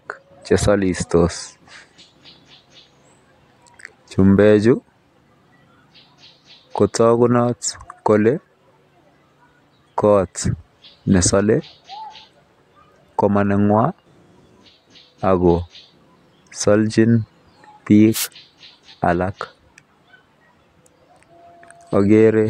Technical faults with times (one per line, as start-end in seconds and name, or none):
18.13-18.28 wireless microphone noise hit